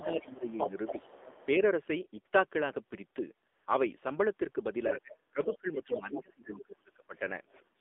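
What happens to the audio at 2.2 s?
At 2.2 s the speech carries AMR narrowband mobile codec damage, as it does through the whole clip. The codec rebuilds the voice from a vocal-tract model excited by a few pulses per short frame. The sound is confined to a band of roughly 250 Hz to 3.6 kHz, so it is thin and muffled. The damage is plainly audible as a buzzy, synthetic edge, which fits a low mode around 7.4 kbps.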